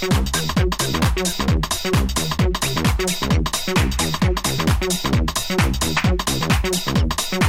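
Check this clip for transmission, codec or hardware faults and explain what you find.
No faults can be heard.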